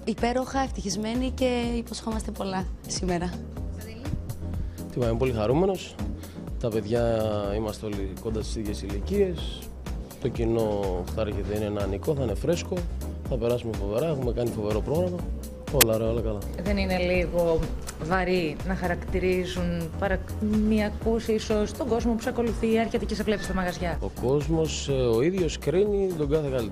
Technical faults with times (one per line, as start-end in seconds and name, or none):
15.81 file tags played as audio